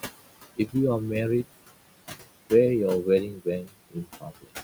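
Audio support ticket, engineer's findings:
Noise suppressor artifacts, whole clip. Background pulled down about 19 dB between phrases, rising back under speech. Suppressor's per-band gain tracking the signal. Room noise, about 13 dB below speech, is the room's own background, so it's not the cause.

Speech cut by the noise suppressor, 3.32 to 3.46 s (drop about 10 dB) and 3.63 to 4.49 s (drop about 22 dB, a few hundred ms affected). Quiet speech swallowed with the noise, not a clean gap, so it's suppressor misclassification and not a dropout.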